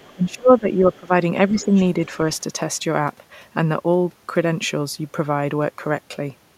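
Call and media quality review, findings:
Other side's voice leaking through, 0.00–0.13 s and 1.61–1.82 s. Faint second talker well under the main voice, roughly 25–30 dB down. Likely residual echo past the echo canceller. A separate voice, not a reverb tail of the talker's own speech.

Speech suppressed in double talk, 0.13–1.12 s (dips around 20 dB) and 1.48–1.71 s (around 10 dB). Talker's level collapses while the far end is active. Likely echo canceller attenuating both sides at once. Tied to overlap, unlike gain or network dropouts.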